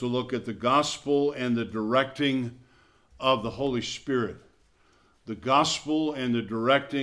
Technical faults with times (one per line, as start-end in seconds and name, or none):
none